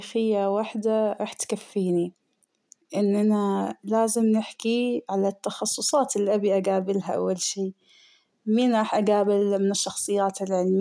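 Nothing in the speech signal points to a technical fault at any moment of the recording.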